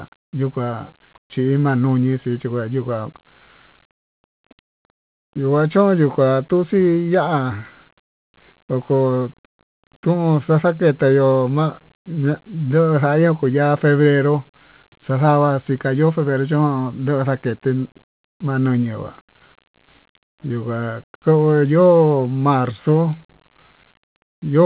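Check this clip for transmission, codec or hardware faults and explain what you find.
No faults are audible anywhere in this speech.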